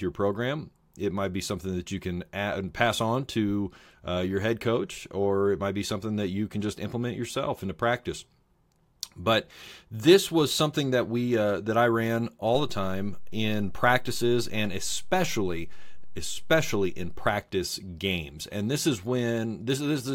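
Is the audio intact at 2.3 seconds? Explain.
Yes, the speech at 2.3 seconds plays through intact, with no audible fault at that moment.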